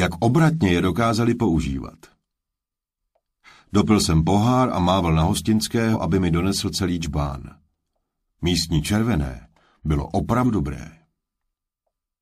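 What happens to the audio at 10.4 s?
At 10.43 to 10.45 s the decoder drops whole compressed frames, either missing from the file or rejected as damaged, so compressed frames are skipped. Around a tenth of a second of audio never plays, which fits a couple of frames of roughly 46 ms each. The sound jumps forward at that point.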